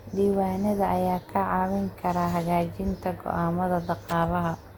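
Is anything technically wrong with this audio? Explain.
Yes. The speech shows generation loss from start to finish. It sounds swirly and smeared, with a hollow, thinned-out tone. Consonant attacks blur instead of landing crisply. The likely cause is repeated lossy re-encoding, perhaps around seven passes, which fits an Opus chain at about 64 kbit/s. Each decode and re-encode quantises again on a shifted frame grid. Noise and spectral gaps pile up with every pass. Content still reaches about 20.2 kHz.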